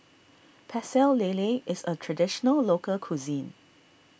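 Nothing in this bit of speech trips any alarms; there's no technical fault to point to anywhere along it.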